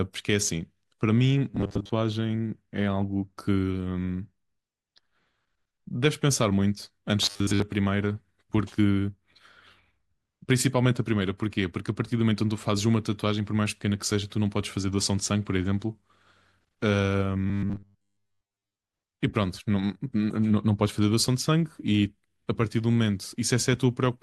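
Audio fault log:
1.51–1.92 s, 7.23–7.62 s, 17.47–18.76 s: robotic sound from repeated short buffers. In all three spans the speech becomes a rigid metallic buzz at 100 Hz that still loosely tracks the talker. The cause is likely playback repeating a 10 ms block whenever fresh audio arrives late, with most of the real signal skipped in the process. That repetition period imposes the fixed 100 Hz pitch over the natural voice.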